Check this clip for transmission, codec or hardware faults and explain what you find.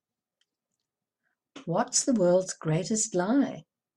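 No faults are audible anywhere in the speech recording.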